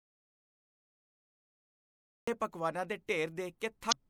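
The speech opens in dead silence, with no room tone at all, which is already under way when the clip begins and lasts until 2.28 s, where sound returns abruptly on "ਪਕਵਾਨਾਂ ਦੇ". This is an audio dropout to silence, likely from a lost input while the recorder kept writing silence.

From 3.88 to 3.93 s a brief glitch breaks through the speech. This points to damaged data in a compressed stream: the decoder misread corrupted frames, lost sync and jumped to the next valid frame.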